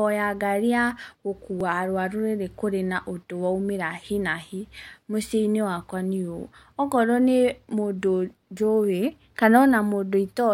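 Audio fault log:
1.61 s repeated buffer: new audio arrived late, so a 1.45 ms slice of speech, which fits a 64-sample buffer, plays twice. So short a repeat sounds like a click. On a spectrogram it shows as a thin vertical line, and the waveform has a sudden step.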